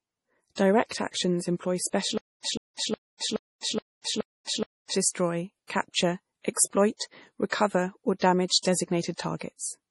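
MP3 compression runs through the whole speech clip, with heavy codec damage. The likely cause is an MP3 encoder starved of bits, at a rate that fits about 32 kbps. With too few bits to go around, it discarded weak frequency lines, which switch in and out from frame to frame. The result is a watery, swirly texture with smeared onsets, and nothing is heard above 11.5 kHz, where the encoder cut the treble off.

A stutter with silent gaps runs from 2.18 s to 4.94 s, just after "actions employ". A 154 ms fragment plays, then about 268 ms of digital silence follows, and the cycle comes back every 422 ms, five times in all. The likely cause is a player or stream stalling, replaying its last buffered fragment at each retry and then running dry. Whatever audio belonged in that span is gone.

A CD skip falls from 2.57 s to 2.61 s, inside the stutter and again just after "actions employ". The player mutes for roughly 30 ms, heard as a brief tick or gap, and then resumes from a different point. 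This is what happens when a knock or a disc flaw throws the laser onto another turn of the spiral, so the audio jumps forward or back by one or more turns rather than carrying on where it stopped.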